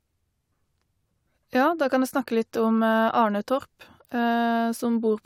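No technical faults are audible.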